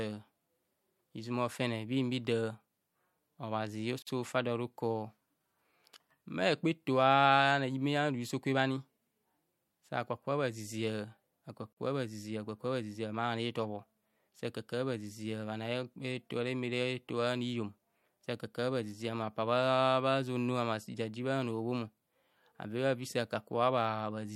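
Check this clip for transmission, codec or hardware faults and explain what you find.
Two short dropouts break the speech, at 4.02 s and 11.73 s, each a gap of about 46 ms with softened edges before the speech resumes where it stopped. These are gaps at a join of encoded pieces: separately encoded segments were spliced untrimmed, leaving encoder start delay and final-frame padding in place.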